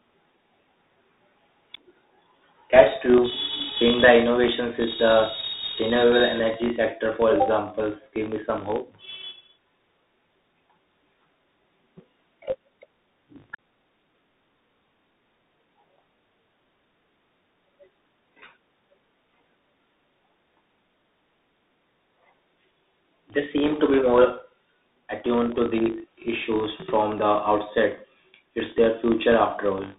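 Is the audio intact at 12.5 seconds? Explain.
No. At 12.5 s, as throughout the clip, a filter restarted on every block adds a 50 Hz buzz of small ticks that swells and fades with the speech level, unlike steady mains hum. Tandem speech coding is also present: CVSD, then G.711 A-law, then CVSD again. Each pass recodes the previous one's damage, leaving speech rougher and noisier than a single codec would, with nothing above 3.8 kHz.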